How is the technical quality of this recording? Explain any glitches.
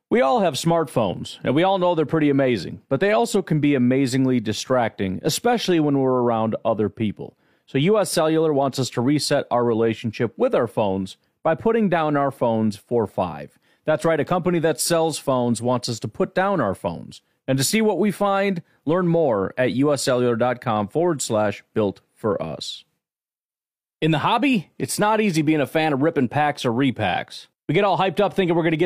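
No technical faults can be heard in the signal at any point in the recording.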